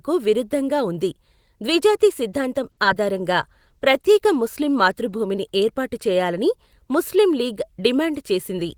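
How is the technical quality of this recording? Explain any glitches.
Three network-related glitches cluster in the middle of this speech recording.

From 2.71 to 2.79 s there is a short stall from a late packet: the jitter buffer ran dry, so the last sound is held for about 60 ms, then resumes with nothing lost. That hold is what separates it from a dropout.

From 2.83 to 2.86 s comes short concealed packet loss. Roughly 20 ms never arrived, and about 10 ms was papered over with continued sound, leaving a brief smear where a tiny piece is actually gone.

From 3.39 to 5.33 s a call bitrate drop makes the sound rough and duller, which fits the encoder falling from 32 to 18 kbps. It lasts seconds and spreads across everything, unlike the momentary glitches.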